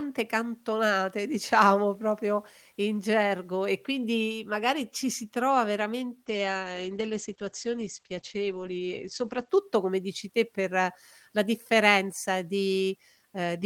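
From about 6.3 s to 9.55 s the speech goes through a call bitrate drop. The connection's bandwidth estimate sank, so the encoder got squeezed hard, and the sound fits a fall from around 48 kbps down to roughly 10 kbps. The top end gets chopped off above 8 kHz, so it turns muffled and rough, staying at its worst for about 3.2 s before clearing just ahead of "come dici te per".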